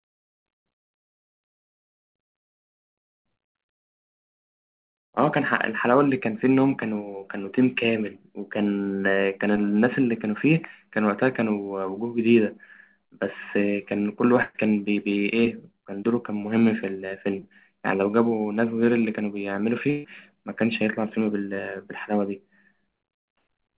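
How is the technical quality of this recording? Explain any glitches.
Two brief glitches are bursts of packet loss, heard over narrowband call audio with nothing above 4 kHz, which fits a G.711-style call codec.

At 14.42 to 14.56 s and 19.90 to 20.06 s, about 120 ms and 140 ms of sound never arrived. The receiver stretched the last sound into a fading buzz or hiss, then jumped ahead. A plain dropout would go silent instead.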